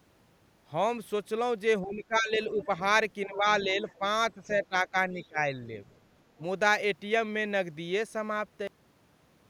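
From 1.83 to 2.69 s the speech dips in level by up to around 15 dB, for about half a second in total. This is speech suppressed in double talk. Both ends likely talked at once, and the echo canceller turned the talker down along with the echo.

At 2.60 to 2.66 s a faint second talker comes through, about 25 dB below the speech. This is the other side's voice leaking through. The echo canceller likely did not remove all of the loudspeaker sound from the microphone.

From 3.27 to 5.64 s the suppression returns. The speech drops by up to around 10 dB, for about a second in total.

Inside that stretch, more scraps of the other side leak through. One comes at 3.89 to 3.95 s, around 30 dB down. Another comes at 4.63 to 4.67 s, around 25 dB down.

A very faint leak follows at 5.93 to 5.97 s, around 40 dB down.

At 6.38 to 6.42 s the speech dips briefly, by around 5 dB.

At 8.67 s the audio stops dead. 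This is a cut-off end. The final buffers were never written, so the sound falls straight to digital silence with no decay.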